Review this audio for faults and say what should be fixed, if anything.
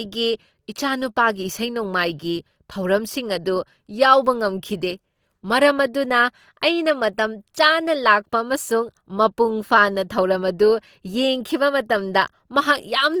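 Throughout the speech, voiced tones sound grainy, rough and noisy while bandwidth stays full; likely Opus compression refilling bit-starved bands with noise, consistent with about 24 kbps. Encode at a higher Opus bitrate or keep a lossless master for distribution.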